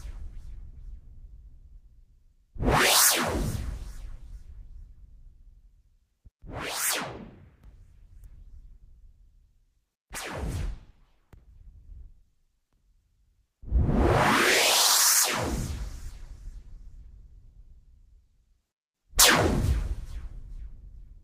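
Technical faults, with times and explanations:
14.5–19.57 s, call bitrate drop: the sound turns coarse and muffled for about 5 s, consistent with the encoder falling from 32 to 16 kbps and losing high-frequency detail.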